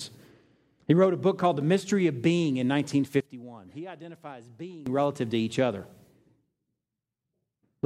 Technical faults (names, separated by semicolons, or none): sudden gain jump